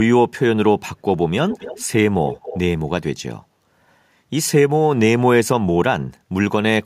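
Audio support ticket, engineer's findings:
Echo leak, 1.49–1.85 s and 2.26–2.6 s: faint repeat of the voice 280 ms late, about 15 dB down. Likely far-end echo canceller letting loudspeaker pickup through; a distinct delayed copy, not reverb smear.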